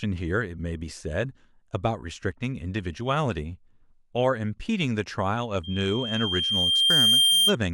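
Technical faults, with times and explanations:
5.63 to 7.56 s, loudspeaker feedback squeal: the microphone picks up its own loudspeaker, and at 3.2 kHz the loop gain exceeds one. The tone swells over roughly a second and a half to about 10 dB above the speech, showing as one bright horizontal spectrogram line.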